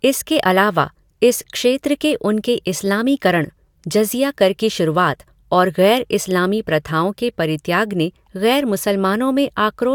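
No technical faults are audible anywhere in the speech.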